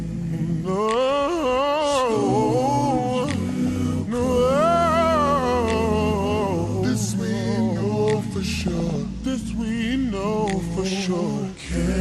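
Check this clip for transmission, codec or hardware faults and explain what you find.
Two faults are present: constant coding damage throughout, and two short bursts of corrupted audio.

MP2 compression is the likely cause of the damage throughout. Too few bits are available, so whole upper sub-bands drop out and the remaining bands are coarsely quantised. This fits a low rate of about 80 kbps. The result is a dull, gurgling, granular sound that is plainly audible from start to finish.

DAB burbling occurs from 3.49 to 3.76 s and again from 8.61 to 8.96 s. Bit errors got past error correction into the MP2 data, corrupting samples and scale factors, so that single sub-bands get short blips of noise or jump in level for up to a frame. The error rate sounds like a few tenths of a percent. Each burst comes across as short blips of noise in single sub-bands over the sound.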